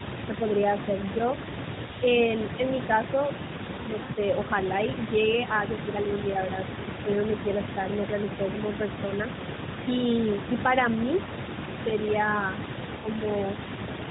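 Speech carried over an AMR narrowband mobile link, with nothing above 4 kHz and only light coding roughness that fits the 12.2 kbps mode. From the start to 5.15 s a faint second copy of the speech trails the original by about 0.3 s, sitting about 15 dB below it. This is an echo leak, most likely from the far end playing the call on a loudspeaker whose echo canceller did not fully remove what its microphone picked up, so the residue came back down the line. Between 3.11 and 3.16 s the speech briefly dips by a few decibels over roughly 50 ms, the pattern of speech suppressed in double talk, when the canceller, likely unable to tell the talker from the overlapping loudspeaker echo, turned everything down for a moment. The speech then smears and fades from 4.04 to 4.12 s, a 60 ms gap that fits three lost 20 ms frames, and again from 12.96 to 13.08 s, an 80 ms gap matching four. These are lost AMR speech frames: radio errors made the frames fail their checks, so the decoder repeated the last good pitch and vocal tract settings at falling gain. 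That produces the drawn-out, fading sound before the signal returns weak or rough for a moment.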